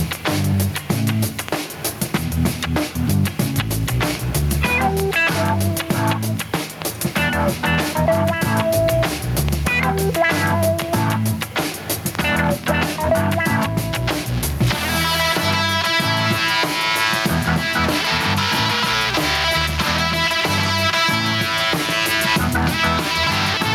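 Gain pumping runs right through the clip, with the gain swinging around 10 dB. It's likely the input gain was cranked way too high and a fast limiter kept clamping down, leaving everything squashed.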